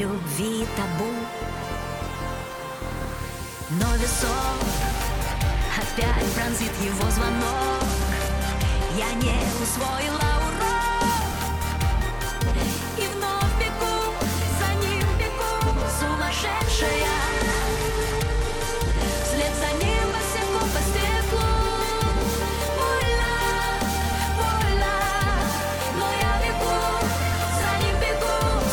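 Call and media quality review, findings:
Treble dulls and a gritty, grainy noise rises, 7.39–11.09 s, then clears. Bluetooth SBC bit pool drop: link congestion, encoder starved of bits, top sub-bands emptied, remainder coarsely quantised. Consistent with a fall from bit pool 28 to 14, around 108 kbps.

Same dull, gritty stretch, 17.19–20.65 s, recovering at the end. Repeat Bluetooth SBC bit pool drop, same step down, same starvation of upper sub-bands and coarse quantisation.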